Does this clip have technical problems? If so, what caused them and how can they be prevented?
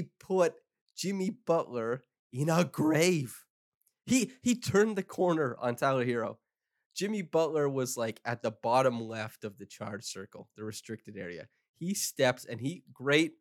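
No, nothing in this speech recording stands out as a technical problem, so there's nothing here that needs a fix or any special precautions.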